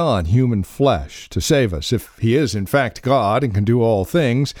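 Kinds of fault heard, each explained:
No technical faults can be heard in this speech recording. There is nothing to list or explain here.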